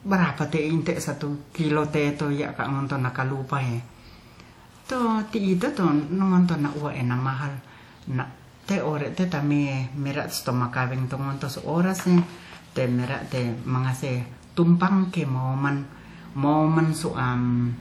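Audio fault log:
Throughout: low-bitrate audio saved at a high bitrate. The speech sits in an MP3 that goes up to about 19.9 kHz and looks like a generous encode, but it still carries the artefacts of a much leaner codec. That points to a likely cause: something like a 48 kbit/s WMA stage re-encoded at around 192 kbit/s. The second pass keeps the file big but can't restore what the first one threw away.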